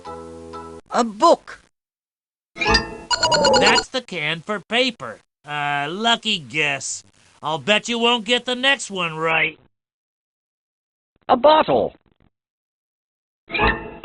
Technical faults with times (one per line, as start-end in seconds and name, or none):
9.31-14.05 adaptive stream at a lower bitrate